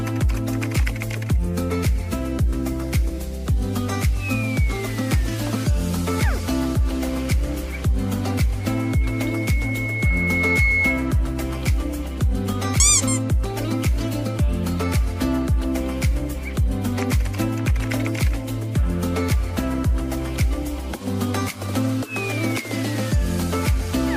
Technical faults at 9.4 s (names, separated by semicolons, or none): loudspeaker feedback squeal